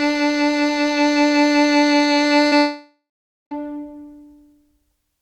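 A music clip with two network faults. At 2.47 to 2.53 s, short concealed packet loss leaves a brief smear where about 40 ms was missing and the decoder stretched the previous sound before resuming. From 2.57 to 3.53 s, a long network dropout is the likely cause: the last sound continues as a fading buzz or hiss, then about 0.49 s of silence, and the music returns having skipped roughly 0.94 s. Unlike the short loss, the filler dies away instead of blending back.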